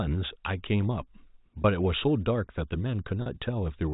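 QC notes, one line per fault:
1.62–1.64 s and 3.22–3.26 s, packet loss with pitch repetition: gaps of about 20 ms and 40 ms are filled by repeating the last pitch period, which sounds like a briefly held, buzzy tone.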